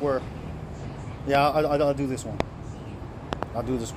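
You'll hear a loud pop at 1.35 to 1.37 s, another at 2.40 to 2.43 s, then a quick double pop from 3.33 to 3.45 s, each jumping roughly 20 dB over the sound, which runs on underneath. Likely a voltage spike from a plug, switch or static.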